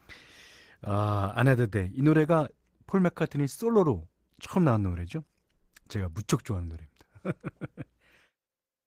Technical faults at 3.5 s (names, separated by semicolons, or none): Opus voice compression